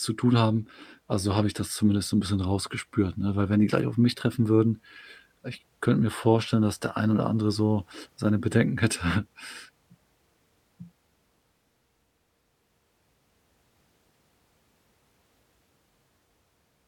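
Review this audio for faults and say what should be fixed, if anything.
Nothing here needs fixing, as no faults turn up anywhere in the recording.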